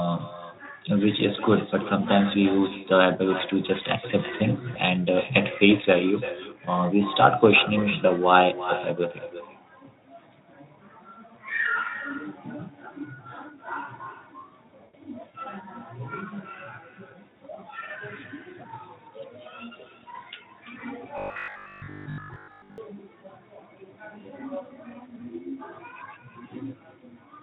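Echo with no canceller runs throughout the speech: the far end's loudspeaker feeds its microphone and nothing removes it, so every phrase returns roughly 300 ms later as a thinner copy about 13 dB below the direct sound.

VoIP packet loss concealed by the speech codec appears at 4.73 to 4.77 s and again at 14.83 to 14.95 s. The decoder extrapolates from its last pitch and filter while fading the gain. The first gap is brief, consistent with a single 20 ms frame missing. The second stretches into a decaying, extrapolated sound, which fits about 100 ms of lost audio, and the weakened sound lingers after the gap.

Robotic sound from repeated short buffers runs from 21.18 to 22.78 s. The sound becomes a rigid, metallic buzz fixed at 50 Hz. This is likely because audio arrived too seldom and a 20 ms chunk was replayed over and over, with most of the real audio, roughly seven tenths, skipped. 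The buzz still loosely follows the speech, and the Speex coding underneath is light.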